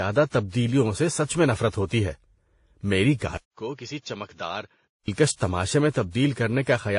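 Transcoding between lossy codecs runs through the whole speech clip. Nothing survives above 10.5 kHz, and the artefacts sound layered: the output of one coder seems to have been re-encoded by a second, which spent its limited bits reproducing those flaws and added its own. The sound points to a likely chain of a low-rate Vorbis stage followed by WMA, with the lower cut-off from the chain remaining.

Input switched to a poorer device from 3.37 s to 5.08 s, ending just before "تماشے میں". The switch opens with a 200 ms silence, after which the speech turns dull and boxy, with nothing above 7 kHz. It drops around 10 dB in level and picks up a new, faint noise floor far below the speech. This likely reflects the recording input moving to a narrower-band microphone or headset call profile, then switching back to the original.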